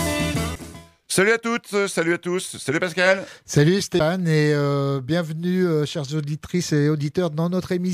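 At about 3.99 s there is a CD skip: the laser jumped to another turn of the disc's spiral, so the player muted for roughly 10 ms and resumed elsewhere. Unlike a plain dropout, the sound after the tick doesn't continue where it stopped.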